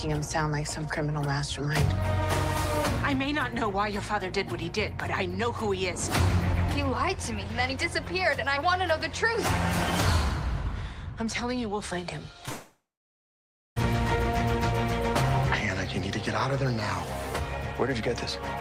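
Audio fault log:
12.45–12.49 s, short concealed packet loss: about 20 ms of audio arrived too late and the receiver patched the gap by extending the preceding sound before blending back. The result is a brief smear or wobble.
12.49–13.78 s, long network dropout: about 1.28 s of audio never arrived, likely a network outage. The last sound stretches into a fading buzz or hiss for roughly a third of a second, then about 0.94 s of silence follows before the audio resumes.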